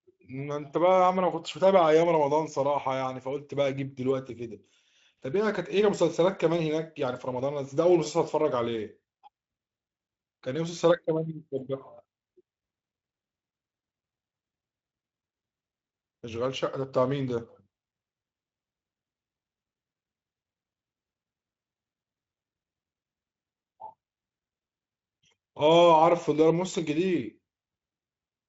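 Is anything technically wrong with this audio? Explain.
No, nothing technically wrong can be heard here.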